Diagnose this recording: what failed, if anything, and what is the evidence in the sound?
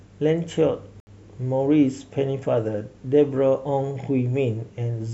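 The speech cuts to silence from 1.00 to 1.08 s, then resumes as if it had played on through the gap. This points to a Bluetooth dropout, likely on the wireless link to playback. Packets arrived too late and were discarded, which fits about five lost frames.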